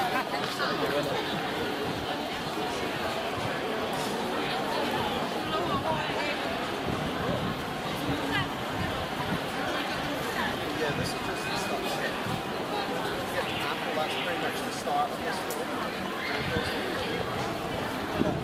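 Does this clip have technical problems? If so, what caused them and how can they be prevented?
Yes. At 7.84 s there is a skip ahead: about a second of sound is missing, and playback jumps straight to later audio with no fill between the two sides. This happens when a stretch is lost in transit or discarded by an overflowing jitter buffer while newer audio was already queued, so the delay drops abruptly by roughly that amount. Preventing it means sizing the jitter buffer for the network's worst bursts and using concealment instead of hard discards.

From 13.81 s to 15.91 s there is a jitter buffer speed-up. The sound runs at about 102% of normal speed with its pitch unchanged, because the receiver repeatedly trims short pitch-period slices to bring an overfull buffer back toward its target delay. In total, only a small amount, around 50 ms, is removed, so the speed-up stays below the pace at which it would sound hurried and there is no obvious jump. 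Preventing it means reducing packet delay variation on the network path and letting the buffer drain more gradually.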